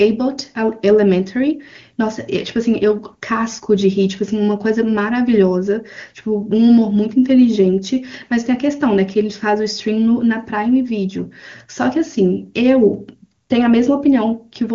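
Nothing stood out on listening to this speech clip, which carries the typical AMR wideband (HD Voice) codec bandwidth with no content above about 7.2 kHz.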